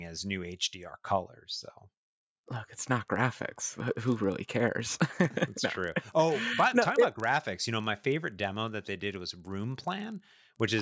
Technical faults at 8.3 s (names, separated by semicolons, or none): resampler restarted on every block